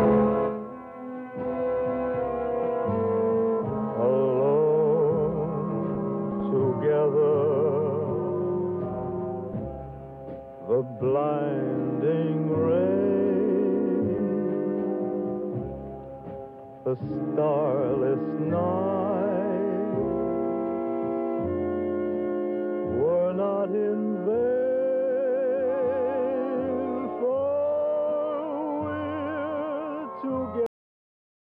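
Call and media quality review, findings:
Cut-off end at 30.66 s: sound stops abruptly mid-event, drops straight to digital silence with no decay through the final 0.8 s. Probable component: playback/capture buffer flush at stream close. Final buffers never written, so tail truncated.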